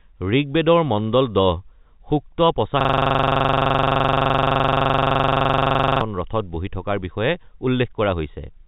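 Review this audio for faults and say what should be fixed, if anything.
Clock drift between sender and receiver runs through the whole recording: the sending side's clock is running roughly 4 percent fast, so the receiver's jitter buffer keeps overfilling and must shed audio to keep up. Unlike random network jitter, the error always leans the same way and never settles. Locking both ends to a common clock, or resampling adaptively at the receiver, would prevent it.

Repeated timing corrections follow from that drift, from 0.06 s to 8.57 s, with the speech effectively delivered at 104 percent speed as short slices are dropped at uneven intervals. These sound like slight hiccups and a hurried, unsteady tempo, not distinct gaps or clicks, which sets them apart from packet loss. Smooth time-scale adjustment, not hard cuts, would hide them.

A system hang loop takes over from 2.81 s to 6.01 s, when one 42.67 ms piece of audio repeats exactly, some 75 times, which fits a 2048-sample ring buffer. 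At 23.4 Hz it is heard as a rattling, machine-gun stutter, not a smooth tone. A watchdog that mutes output when the audio thread stalls would prevent it.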